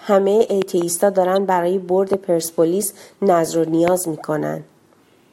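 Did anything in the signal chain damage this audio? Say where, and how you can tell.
Yes. Sharp loud pops sit on top of the speech, which carries on underneath: a quick double pop between 0.62 and 0.84 s, a single one at 2.14 s, and another from 3.88 to 3.90 s. The loudest stand well above the speech level, roughly 15 dB over it. This points to the analogue wiring or power stage, with the likely cause being a voltage step or pulse from a plug, switch or static discharge that the downstream circuitry shaped into a thump.

A separate brief blip at 1.36 s is damaged data in a compressed stream, which places the fault in the codec, storage or transfer stage rather than the electronics. It is a short glitch in the sound, not a pulse added over continuing sound. Corrupted bytes there made the decoder misread a frame and lose sync while it searched for the next valid frame header.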